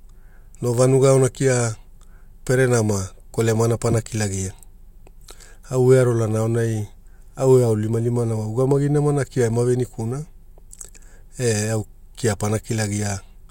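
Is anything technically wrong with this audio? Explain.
No, the speech signal comes through intact, with nothing in it pointing to a technical problem.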